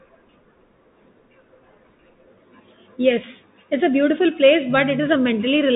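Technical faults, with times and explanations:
Throughout: Bluetooth CVSD headset codec. The speech has gone through the narrowband headset path, and the damage is plain to hear. Nothing gets past about 3.8 kHz, so everything sounds boxed in. CVSD codes each sample as a single up-or-down bit, which fits a 64 kbps stream, and it adapts its step size as it goes. When loud bright sounds change faster than the step can follow, they smear and distort. The s sounds come out scratchy, and a grainy hiss sits under the speech.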